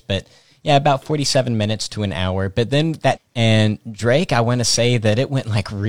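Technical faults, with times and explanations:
3.12 to 3.18 s, stream segment skipped: one segment of the segmented stream likely failed to load, so the player carried on with the following segment. The speech jumps abruptly forward with a short blip, leaving a gap where part of the programme is lost.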